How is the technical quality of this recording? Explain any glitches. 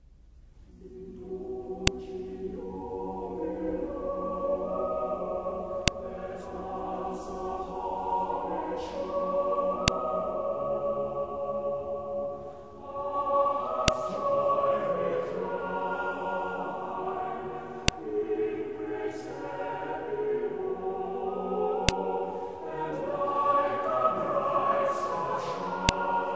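The recording has a recurring fault: sharp clicks at 1.87, 5.88, 9.88, 13.88, 17.88, 21.89 and 25.89 s. This is a file header played as audio. Joined 4-second WAV pieces kept their headers, whose bytes play as samples, producing a brief, loud snap at each piece boundary.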